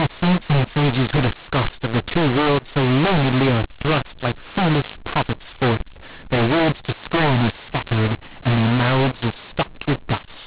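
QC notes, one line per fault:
Throughout, mu-law and A-law mixed up. Speech coded as mu-law G.711 is decoded as A-law. Levels come out scrambled, so the sound is harsh and distorted. Near-silent samples are lifted well above silence, so pauses fill with noise. The band stops near 4 kHz.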